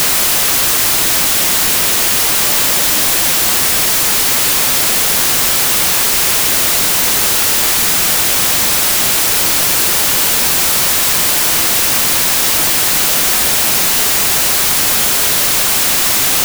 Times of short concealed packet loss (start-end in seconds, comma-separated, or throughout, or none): none